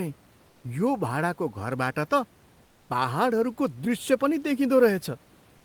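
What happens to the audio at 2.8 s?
Comfort noise replaces the background from 2.65 to 2.89 s: likely discontinuous transmission, so the receiver fills 240 ms with steady, featureless noise about 3 dB quieter.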